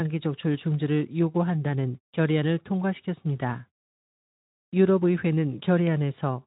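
Speech, passed through a Speex path at about 15 kbps with the band ending near 3.8 kHz, with no technical faults to report.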